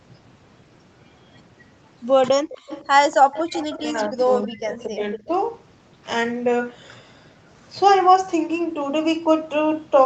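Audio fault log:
2.49–2.87 s, 3.32–3.78 s, 4.71–4.83 s, 5.15–5.27 s: echo leak. A faint, delayed copy of the voice returns about 242 ms after the original, at about 15 dB below the speech (about 20 dB below at 4.71 s), in short scraps. The likely cause is an echo canceller on a loudspeaker end that failed to remove its microphone pickup. On a spectrogram, weak harmonic traces repeat the preceding speech shifted a quarter second later. The waveform shows a low ghost envelope.
3.77–4.19 s, 4.39–5.01 s, 5.17–5.29 s: speech suppressed in double talk. The voice sinks by about 15 dB, and by about 20 dB at its deepest near 4.4–5.0 s. It loses presence in pieces, about 0.3 s, 0.4 s and 0.07 s in total across the three stretches. This likely comes from the echo canceller clamping down while both sides overlap, mistaking the talker for echo. On the waveform, the amplitude envelope caves in abruptly. 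On the spectrogram, the upper harmonics and consonant energy thin out or leave gaps.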